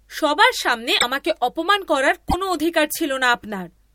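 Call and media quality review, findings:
Jump and short glitch, 0.98–1.04 s, between "সবার সামনে" and "আমাকে অপমান করার". Likely broken MP3 bit reservoir: dropped frames leave the next frame reading borrowed bits from the wrong frame, garbling about two 26 ms frames.

Same skip and glitch, 2.29–2.35 s, right after "সামনে আমাকে অপমান করার". Again likely broken MP3 bit reservoir; the post-cut frames decode from mismatched reservoir data.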